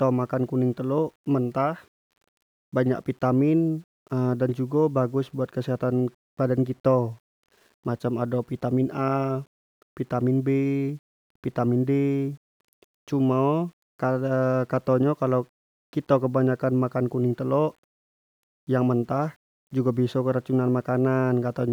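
From start to finish the speech carries a grainy, gritty distortion that rises and falls with the signal, about 40 dB below it. Quiet syllables and decays sound rough and broken up. The likely cause is low bit depth without dither, consistent with rounding to around 9 bits. What separates it from ordinary hiss or dithered noise is that the error is tied to the sound itself and is not a steady, independent noise floor.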